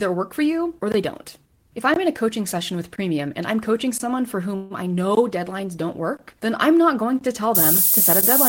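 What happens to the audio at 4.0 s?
A gap between chunks runs from 3.98 to 4.00 s, a 20 ms hole. The speech was delivered in 1.0 s chunks, and at this join silence is left between them before the audio resumes. Nothing is cut out of the speech; it is pushed back slightly. The result is a brief dropout, a short hole in the flow.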